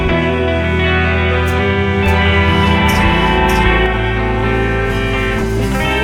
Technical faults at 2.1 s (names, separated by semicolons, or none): doubled audio track